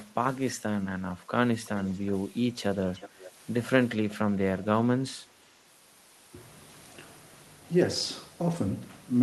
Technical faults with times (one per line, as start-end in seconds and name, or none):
1.66-2.11 echo leak
2.94-3.31 echo leak
4.10-4.15 echo leak